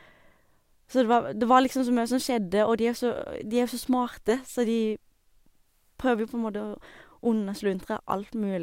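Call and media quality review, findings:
No audible faults found in the speech recording.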